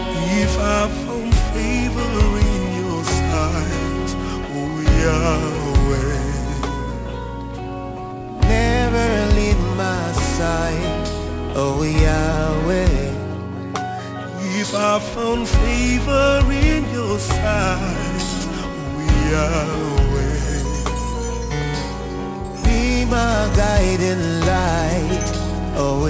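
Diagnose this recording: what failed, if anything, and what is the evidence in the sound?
Aliasing at the sample-rate conversion stage runs throughout. Content above 8 kHz has folded back as gritty, inharmonic tones roughly 20 dB below the signal, consistent with a 44.1 to 16 kHz conversion without an anti-alias filter. A clean band limit would dull the sound instead of adding these false tones.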